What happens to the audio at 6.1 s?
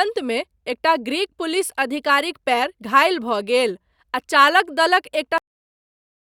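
At 6.1 s the audio is already gone. It has a cut-off end: the speech stops abruptly at 5.38 s and the rest of the clip, up to 6.24 s, is digital silence. The final buffers of sound were never written or played back, so the speech ends mid-sound with no natural decay. On a waveform the signal drops straight to a flat line. On a spectrogram every frequency band goes dark at the same instant.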